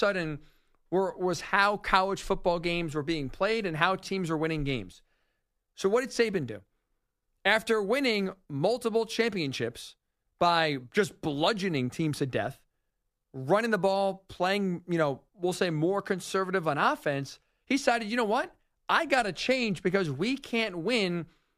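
No technical faults can be heard anywhere in this recording. The speech continues without any interruption or disturbance in its playback.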